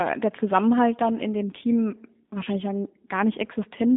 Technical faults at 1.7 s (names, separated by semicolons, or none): G.729 codec